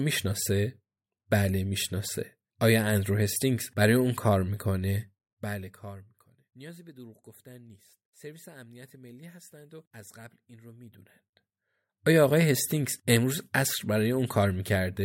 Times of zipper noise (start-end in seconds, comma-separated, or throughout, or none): 5.00-6.34, 10.81-11.61